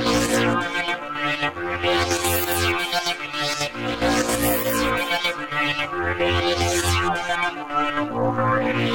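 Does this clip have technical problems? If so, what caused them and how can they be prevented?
Yes. Under the music there is a DECT cordless phone buzz running through the whole clip, a thin, steady 100 Hz tone rich in harmonics and sitting far down, well below the music. A nearby DECT handset or base transmits a brief radio burst every 10 ms, and some stage in the audio chain rectifies that RF, turning the burst train into an audible buzz at the burst rate. To prevent it, move DECT equipment away from the recording chain and use shielded, properly grounded cabling.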